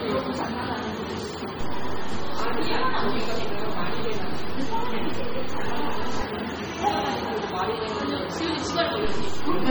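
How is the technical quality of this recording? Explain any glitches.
The technical quality is poor: heavy codec damage runs through the whole recording, and the baseline shifts twice.

Heavy MP3 compression is the likely cause of the watery, swirling texture throughout these sounds. The encoder had too few bits, which fits a rate around 32 kbps, so weak frequency lines drop in and out between frames and transients smear. A spectrogram shows a hard ceiling with nothing above 19.8 kHz and patchy, flickering holes in the upper bands.

A DC step shifts the waveform's zero line at 1.61 s and holds it until 6.22 s, when it steps back. A second step starts at 9.05 s and stays to the end. Each jump and return is heard as a low thump or click while the sound carries on unchanged. On the waveform the whole trace sits visibly offset from centre between those points, and a spectrogram shows a brief broadband smear at each edge.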